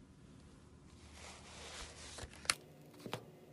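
A recording of sounds that, from 2.53 s to the end, plays twice as fast and a full octave higher. This is a wrong sample rate fault, which fits 24 kHz material being played at 48 kHz. Unlike a pitch shift, tempo and pitch rise together.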